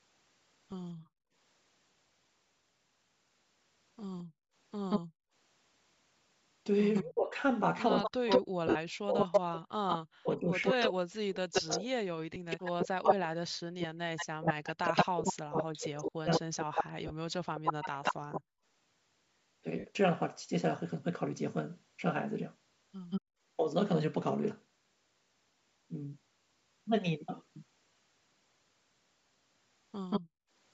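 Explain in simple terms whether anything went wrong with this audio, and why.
Several things went wrong in this speech recording.

Brief noisy, smeared blips at 0.71, 8.67 to 8.76, 12.34, 15.23, 17.07 to 17.11 and 19.79 to 19.85 seconds are lost LE Audio frames. Small chunks of the Bluetooth signal never arrived, and the receiver patched each gap with a noisy guess.

The room's background sound drops away between 0.95 and 5.33 seconds, for about a second in total, and again at 23.21 to 23.41 and 30.21 to 30.5 seconds. This is background gated by the echo canceller: while the loudspeaker was playing, it turned the microphone down hard.

From 4.19 to 18.41 seconds, and in short bursts at 23.1 and 30.1 seconds, a second copy of the voice follows about 180 milliseconds behind, often nearly as loud as the original. This echo leak was likely caused by loudspeaker sound getting past the echo canceller.

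Between 7.02 and 18.4 seconds the voice repeatedly dips or cuts out in pieces, for about seven seconds in total. This is speech suppressed in double talk. It likely happened because both sides spoke at once and the canceller turned down the talker along with the echo.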